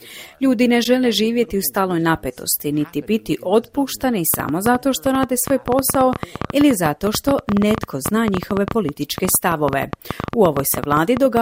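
From 4.34 s to 11.38 s a train of clicks runs over the sound: some seventy near-identical pops at around 10.4 per second, unevenly spaced and well above the programme level. Their repeated shape, unlike random crackle, points to a likely external pulse source.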